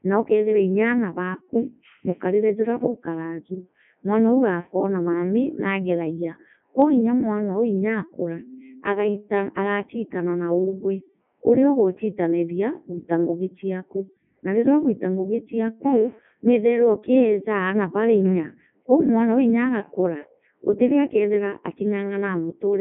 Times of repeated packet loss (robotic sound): none

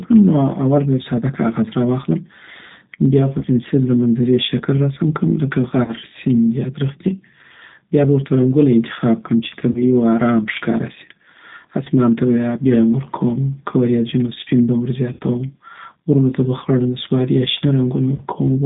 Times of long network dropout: none

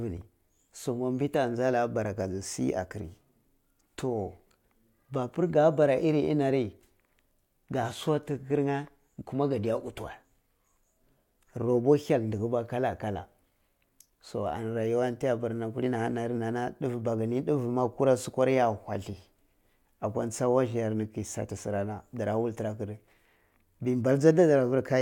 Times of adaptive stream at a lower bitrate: 7.63-11.63

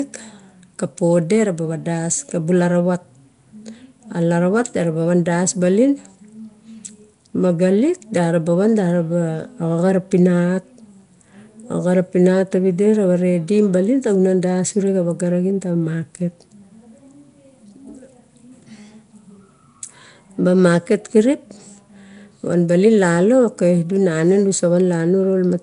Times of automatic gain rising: none

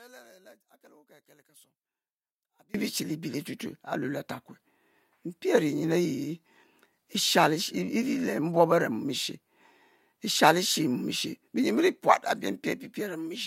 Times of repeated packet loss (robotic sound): none

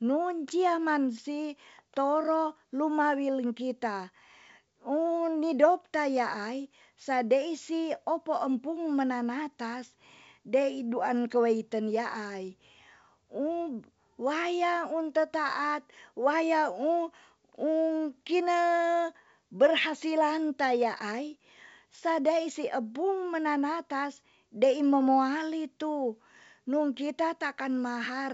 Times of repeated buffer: none

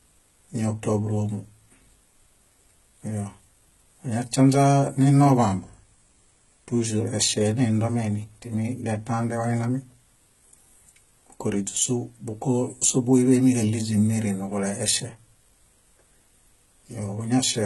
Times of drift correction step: 5.37-6.86

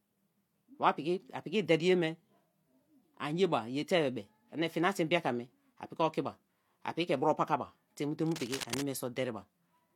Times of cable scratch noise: 8.26-8.82

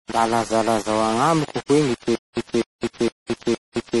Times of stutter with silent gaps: 2.15-4.00

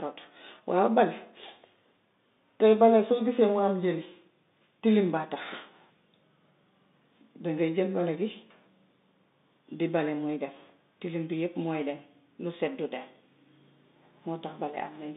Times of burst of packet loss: none

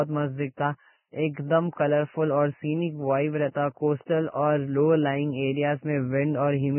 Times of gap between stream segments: none

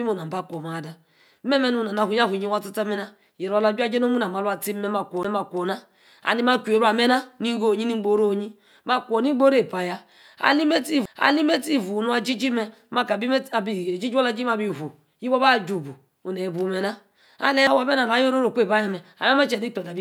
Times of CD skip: 5.23, 11.05, 17.67

